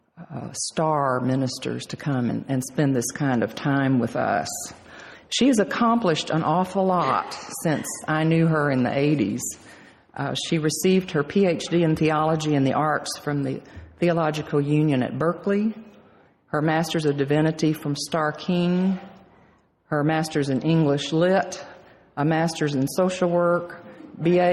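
Gain pumping runs through the whole clip. The level is pulled down each time a loud sound arrives and recovers in the pauses, a swing of around 5 dB. Loud and quiet parts sit unnaturally close in level and the audio sounds squashed. The likely cause is input gain set far too high, with a fast limiter or compressor clamping every peak.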